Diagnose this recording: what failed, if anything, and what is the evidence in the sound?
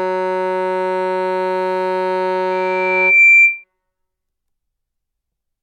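The microphone picked up its own loudspeaker, closing an acoustic loop whose gain exceeded one at 2.4 kHz. This caused loudspeaker feedback squeal: from 2.51 s a pure 2.4 kHz tone swells over roughly three quarters of a second to about 10 dB above the music, then stops at 3.64 s.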